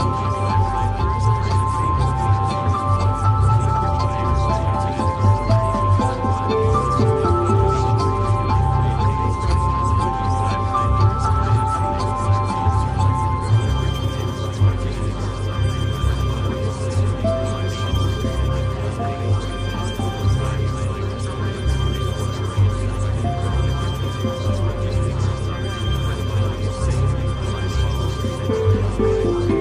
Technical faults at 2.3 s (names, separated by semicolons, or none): none